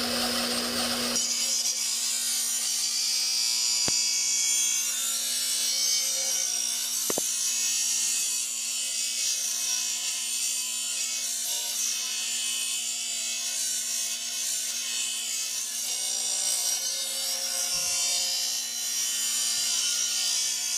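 A loud pop at 3.88–3.91 s, plus a double pop at 7.10–7.20 s, jump roughly 20 dB above the sound, likely electrical voltage transients, showing as sharp waveform spikes and thin vertical spectrogram lines.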